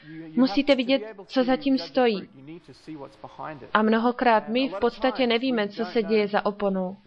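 There are no technical faults to describe at any point in this audio.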